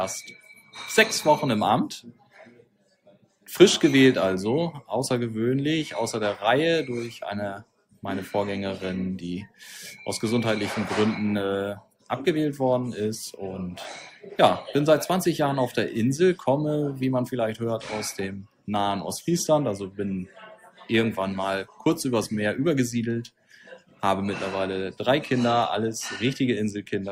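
Nothing goes wrong anywhere in this audio, so there's no fault to point out or time to note.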